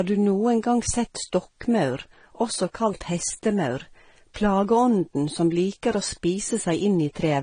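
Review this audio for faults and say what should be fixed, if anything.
The speech shows transcoding between lossy codecs throughout. Nothing reaches above 9.7 kHz, so the top end is dull. Two kinds of coding damage overlap. The likely cause is a low-rate Vorbis encode, around 37 kbit/s, re-encoded as AAC-LC at roughly 32 kbit/s. The second encoder wasted bits on the first one's artefacts and added its own. The lower bandwidth limit stayed. To prevent this, encode once from the original source.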